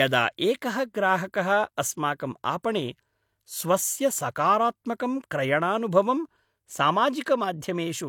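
At 2.63 s a sharp onset in the speech arrives with a short hiss just ahead of it, about 18 ms of noise smeared into what should be silence, so the attack loses its crispness and sounds blurred. This is pre-echo from the transform codec: the onset fell late in a coding block, and the quantisation noise budgeted for that loud moment was spread across the whole block, including the quiet stretch before the attack.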